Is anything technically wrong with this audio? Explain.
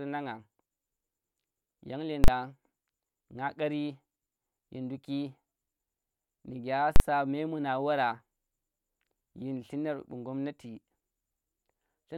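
Yes. Invalid numbers at full scale occur at 2.24–2.28 s and 6.96–7.00 s. A calculation produced infinite or invalid values that were pinned to maximum amplitude for a 40 ms block, so the speech is replaced by a single very loud bang each time.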